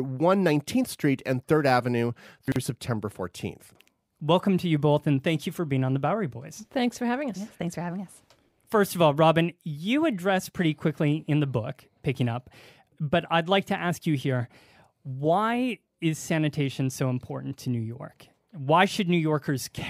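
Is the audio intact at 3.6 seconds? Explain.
No, from 3.6 to 3.76 s the chunks are out of order: a 40 ms chunk plays three chunks late, so the speech briefly jumbles.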